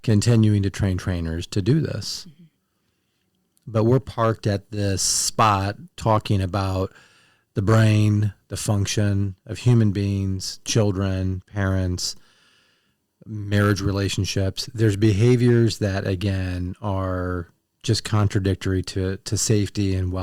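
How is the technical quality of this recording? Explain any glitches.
The recording has one fault, hard clipping, present throughout. Peaks are driven about 7 dB past the limit and cut flat, a small fraction of samples, giving crackle on loud syllables. A waveform shows squared-off tops, and a spectrogram shows harmonic smears reaching high frequencies.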